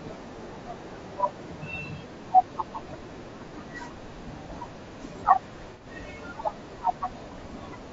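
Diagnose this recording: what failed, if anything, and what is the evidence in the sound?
The whole clip of speech carries a rough, grainy texture, with noise filling the gaps between harmonics and a thin, somewhat synthetic top band. That points to the codec stage, most likely low-delay AAC compression (AAC-ELD) at a low rate, around 32 kbps. Its short frames resolve pitch harmonics poorly, so the damage is plainly audible as a constant spectral roughness. Broadband hiss would sit evenly across the spectrum and leave the harmonic structure intact.

From 5.72 to 5.87 s there is a smeared, noisy or phasey patch lasting about 90 ms, which fits a few consecutive lost frames. This is AAC frame loss with concealment at the network or transport stage. The decoder rebuilt the missing stretch from the last good spectrum, so the signal blurs rather than cutting out. A plain dropout would instead leave a hard gap of silence.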